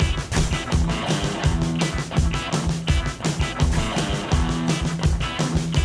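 No technical faults can be heard anywhere in the audio, and the signal stays steady and intact throughout.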